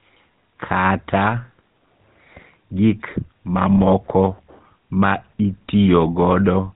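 From start to finish the speech carries the damage of the GSM full-rate codec. The voice is rebuilt from a vocal-tract model fed by a sparse, regularly spaced pulse excitation, which gives it a buzzy, gravelly roughness that is plainly audible throughout. Nothing survives above about 3.9 kHz, so sibilants lose their hiss. On a spectrogram the energy stops at a flat ceiling near 3.9 kHz, with coarse, smeared harmonics below it. The bitrate the sound points to is about 13 kbps.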